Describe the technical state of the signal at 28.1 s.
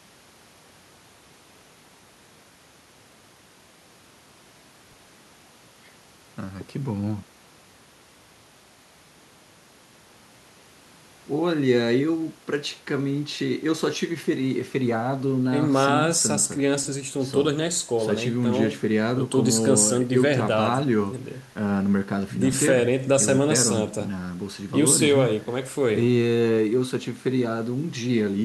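At 28.1 s the speech signal is intact, with no audible fault at that moment.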